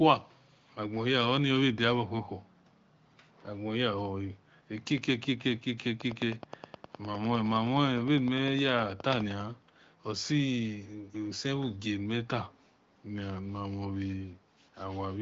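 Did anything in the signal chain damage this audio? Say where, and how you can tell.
Yes, at the call-processing stage. From 0.2 to 0.73 s there's a very faint delayed copy of the speech, sitting roughly 40 dB below the direct signal and trailing it by about 365 ms. That's an echo leak. The likely cause is a far end on speakerphone whose echo canceller didn't fully suppress what its mic picked up from the loudspeaker, so a residue rode back down the line. The HD Voice band edge stays steady around 7 kHz throughout.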